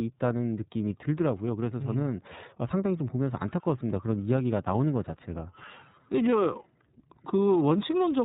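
From start to finish the speech sounds boxed-in and slightly rough, with a synthetic edge and nothing above 4 kHz. That points to the iLBC codec, which codes each frame independently, here likely 30 ms frames at about 13.33 kbps, on a narrowband path.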